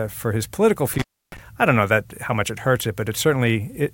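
A loose connection in the signal chain, an intermittent contact, briefly opens the line in this speech clip between 0.94 and 1.38 s. The sound drops out for about 302 ms, with crackle marking where contact breaks and returns, and faint hiss filling the gap.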